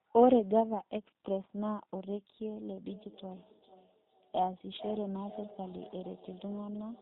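G.729 codec damage runs through the whole speech clip. Nothing above 4 kHz is present, and the speech has the slightly rough, synthetic texture of a low-rate codec that rebuilds each 10 ms frame from a vocal tract filter, a pitch predictor and a few pulses, which fits an 8 kbit/s G.729A stream. A feedback echo between two devices starts at 2.92 s and lasts to the end. Each word returns roughly every 0.4 s, thinner and more ringing each pass, peaking about 17 dB below the speech. Two devices in one room share the call, one plays what the other's microphone sent, and that microphone picks it up again, beyond the reach of either echo canceller.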